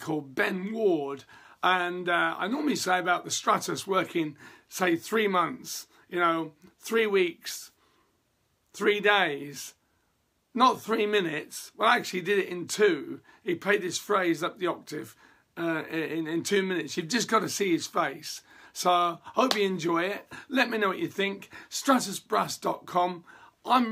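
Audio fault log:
No faults heard anywhere in this audio.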